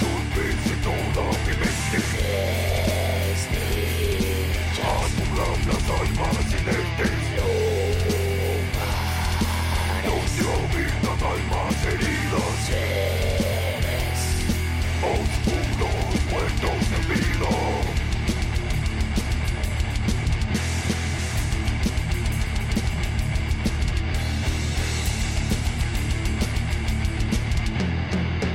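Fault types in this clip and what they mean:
Compressed frames skipped: three short smeared blips, near 5.2, 13.5 and 21.2 s, where the sound jumps forward by roughly 150, 300 and 150 ms. Whole 23.2 ms compressed frames were missing or rejected as damaged, and overlapping neighbours soften each join.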